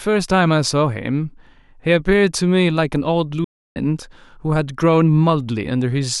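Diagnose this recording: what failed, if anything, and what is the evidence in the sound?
The failure sits at the playback stage: a playback stall. At 3.44 s the speech cuts to silence mid-flow for about 0.31 s, resuming at 3.76 s. The likely cause is the player running out of buffered data or its output thread blocking until it recovered.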